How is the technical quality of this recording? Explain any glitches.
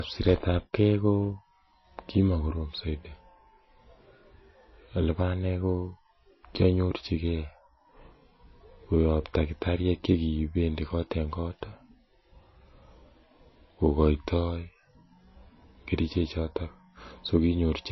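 Dull and band-limited throughout. The speech has nothing above 5.8 kHz, with a muffled top end and swirly coding artefacts. It was likely a low-bitrate MP3 that was then saved at a high bitrate: the re-encode cannot restore the removed treble, so it keeps the original cut-off and artefacts.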